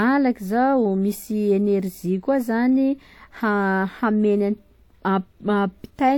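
From start to end, the speech carries two overlaid sets of coding artefacts, heard together, which points to transcoding between lossy codecs, likely WMA followed by low-rate HE-AAC. A spectrogram shows nothing above 18.5 kHz.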